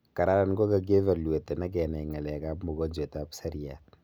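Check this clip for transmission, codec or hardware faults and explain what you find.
No transmission, codec or hardware faults can be heard in the speech signal.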